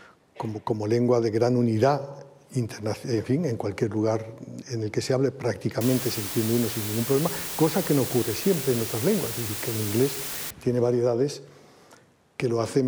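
From 5.81 to 10.51 s there's low bit depth with dither, around 5 bits, so the rounding error becomes a steady, even hiss only about 10 dB under the sound.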